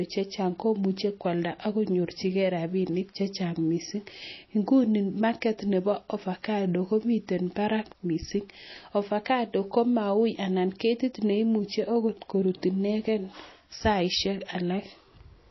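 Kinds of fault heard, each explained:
MP3 compression: The speech has no content above about 5.8 kHz for the whole clip, a fixed treble cut-off. That cut-off and the plainly audible damage point to a likely cause of MP3 encoding at a low bitrate, which fits roughly 24 kbps. Short of bits, the encoder drops the top band and discards weak frequency lines, which flicker on and off between frames. The result sounds watery and swirly. S sounds turn metallic, and consonant onsets smear.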